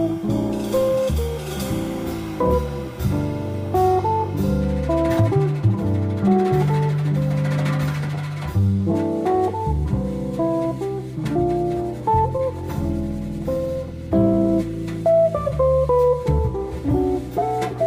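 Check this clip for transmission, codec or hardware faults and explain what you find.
One transmission fault appears. At 12.37–12.42 s, a short stall from a late packet: the jitter buffer ran empty, the last sound was stretched about 17 ms, then playback resumed with nothing lost.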